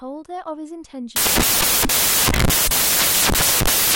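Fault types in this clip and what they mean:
samples built from the wrong bytes: the reader assembles each sample from misaligned or swapped bytes, so the rapidly changing low bits become the dominant part of every value. From 1.16 s to the end of the speech, the sound turns into loud, harsh broadband noise.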